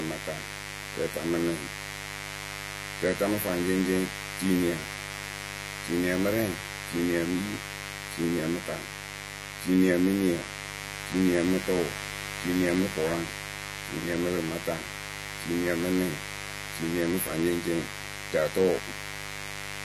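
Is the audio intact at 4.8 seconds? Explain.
No. At 4.8 seconds the speech carries a mains buzz that runs through the whole clip: sharp switching spikes at twice the 50 Hz mains rate, with harmonics reaching into the kilohertz range, give a steady, raspy buzz only about 10 dB below the voice. Unlike a smooth hum, it has a gritty, edged texture.

The speech is also dull and smeared, with a warbling, fizzy grain on sibilants and nothing above 13.6 kHz. This is likely AAC compression at a low bitrate, around 32 kbps.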